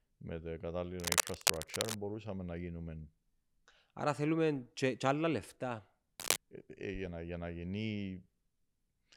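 A worn cable or connector being moved is the likely cause of cable scratch noise from 1.00 to 1.97 s, between "με τα" and "να γίνουμε", and from 6.20 to 6.38 s. Shifting contact resistance lays rough scratching over the speech, roughly level with it at first, somewhat louder later.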